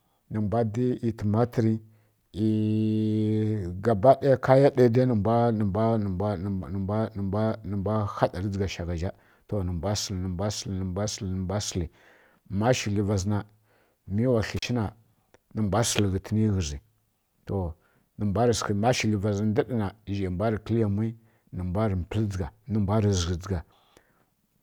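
At about 14.57 s the speech drops out for roughly 36 ms in an intermittent contact fault. A loose plug or cable briefly lost connection, so there's a crackle at each edge, faint hiss in the gap, and the whole glitch is over by 14.65 s.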